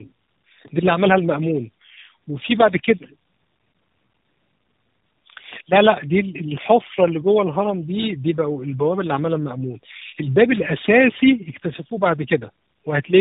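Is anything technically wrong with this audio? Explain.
Yes. Throughout, the speech shows tandem speech coding: it passed through G.729A and then, via a G.711 A-law link, AMR-NB 12.2 kbit/s, so the second speech codec re-encoded already-degraded audio. It sounds rough, muffled and warbly; a spectrogram shows nothing above 3.8 kHz and smeared, blotchy harmonics.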